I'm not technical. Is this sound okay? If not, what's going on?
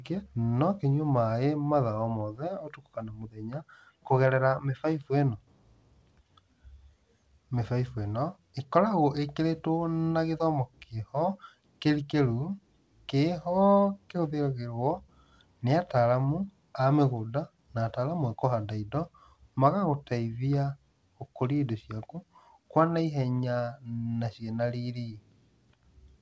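Yes, nothing is wrong with this speech: it came through an ordinary internet call using the G.722 codec, which stops at 8 kHz and so sounds a little less crisp than a studio recording.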